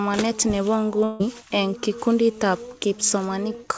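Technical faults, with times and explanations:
1.04 to 1.21 s, likely a long network dropout. The receiver stretches the last sound into a buzzy or hissy, fading fill lasting about 0.16 s, with no true silence. Speech returns with that stretch lost. The band-limited call sound stays capped at 8 kHz.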